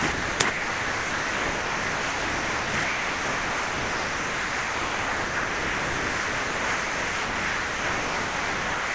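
Everyday sound, carried over a call path with nothing above 8 kHz, keeps giving way to steady comfort noise from 0.12 to 0.40 s, 0.50 to 2.74 s, and 2.84 s to the end. This is likely sound dropped by the voice detector, which treated it as background and stopped sending.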